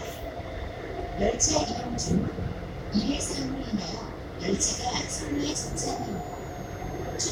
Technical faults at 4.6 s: corrupt frame decoded

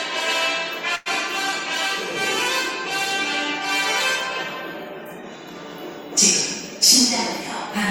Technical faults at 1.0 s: call audio freeze

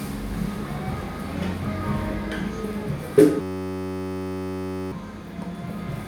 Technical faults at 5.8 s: none

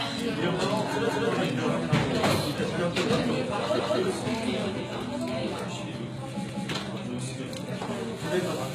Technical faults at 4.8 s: HE-AAC compression

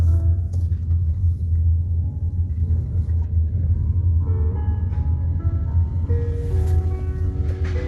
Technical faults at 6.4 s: jitter buffer speed-up

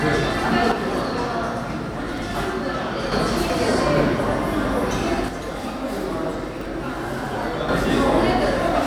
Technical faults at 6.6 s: one channel drops out; chunks out of order

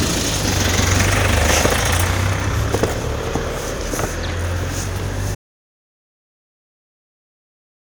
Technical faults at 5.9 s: audio dropout to silence

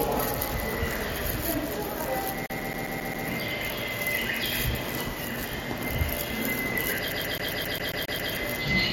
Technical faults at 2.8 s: CD stuck on one turn

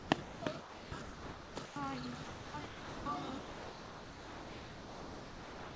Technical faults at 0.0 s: sound dropped by the voice detector

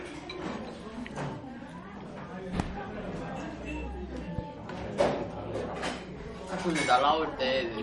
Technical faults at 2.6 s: MP3 compression; loud pop

